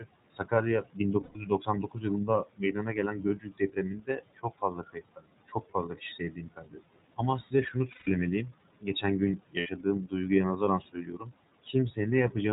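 Throughout, iLBC codec coding at 30 ms frames cuts everything above 4 kHz and leaves the speech plainly rough and synthetic. That is a steady coarseness, unlike the momentary dropouts below. Noise suppressor artifacts run alongside it. The room noise, about 17 dB under the speech, is pulled down by about 21 dB between phrases and returns under them, so the background pumps rather than staying steady.

Speech cut by the noise suppressor comes at 0.0–0.52 s, 0.83–7.19 s, 8.5–9.04 s, 9.37–10.13 s and 10.93–11.31 s. Soft consonants and word endings sink by up to about 22 dB along with the background, sounding swallowed rather than replaced.

Lost iLBC frames fall at 1.23–1.36 s, 7.91–8.08 s and 9.59–9.67 s, lasting 120, 150 and 60 ms. Each gap becomes a held, buzzy vowel, and the voice comes right again almost at once afterward.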